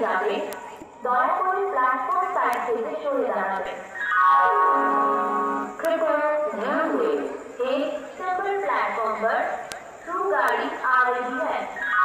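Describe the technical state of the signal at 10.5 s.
A bit error spike occurs at 10.48 s: a single flipped bit in one sample throws its value off by a power of two before it snaps straight back, peaking at about -6 dBFS. It sounds like one sharp, broadband tick with no relation to the surrounding audio.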